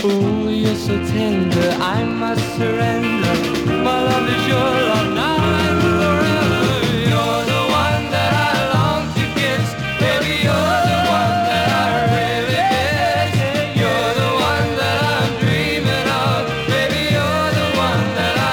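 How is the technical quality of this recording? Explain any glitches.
No glitches or faults audible.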